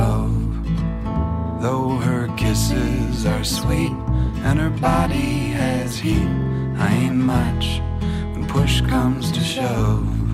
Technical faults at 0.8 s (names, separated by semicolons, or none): none